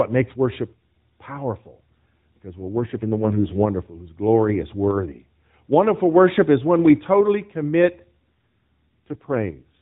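AMR rate drop in this speech clip, from 2.58 to 3.66 s (between "makes worship powerful because" and "whose glory is worthy") and again from 8.22 s after "when we totally commit" to the end: the phone-band voice, carried by AMR-NB with light coding roughness, turns buzzier and more synthetic with no gap or band change. This fits the network pushing the codec from 12.2 down to about 5.9 kbps to spend bits on error protection.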